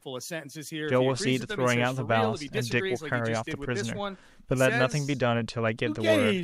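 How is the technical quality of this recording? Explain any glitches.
No glitches or technical faults can be heard here.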